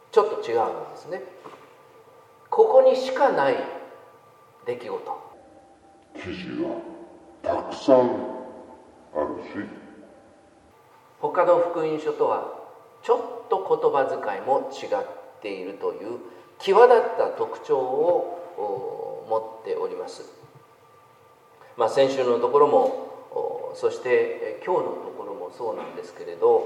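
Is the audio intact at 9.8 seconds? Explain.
No. A section at the wrong speed runs from 5.33 to 10.71 s, covering 9.8 s. It plays at 0.667 times its original speed, likely from being fitted to the wrong clock. Pitch and tempo fall together, leaving the sound slow and deep, roughly seven semitones lower.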